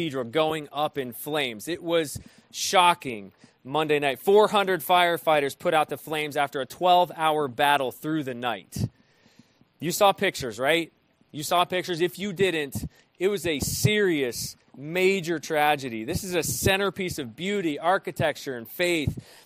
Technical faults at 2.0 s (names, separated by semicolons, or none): none